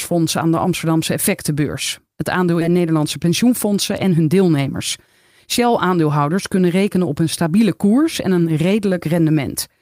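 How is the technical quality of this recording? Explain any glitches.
The recording has two timing glitches close together early on.

At 2.61 s there is a skip ahead. About 0.7 s of speech is missing, and the two sides of the cut are joined directly with no silence or filler between them. Because later audio was already waiting, that stretch was dropped and playback jumped forward. This is what separates it from a dropout: the speech continues abruptly rather than falling into a gap.

From 2.71 s to 4.75 s a jitter buffer speed-up follows. Speech runs at about 109% of normal rate while keeping its original pitch. The receiver repeatedly cut out short pieces of one or a few pitch periods, removing about a fifth of a second in total, to shed the extra buffered delay. The result sounds hurried. Unlike a resampling or clock-speed fault, the voice does not rise in pitch. Only the pace tightens.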